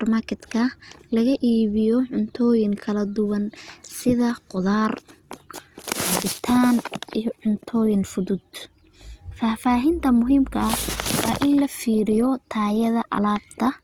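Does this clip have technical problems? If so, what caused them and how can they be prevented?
Yes. Throughout the speech there is plainly audible damage of the kind left by Opus compression, likely in its music (CELT) mode. The encoder keeps each band's energy but fills starved bands with folded or noise content, so the sound turns grainy and rough rather than swirly. Bandwidth stays full, extending to about 20.2 kHz, so the damage points to a low bitrate, around 24 kbps. Encoding at a higher bitrate would prevent it.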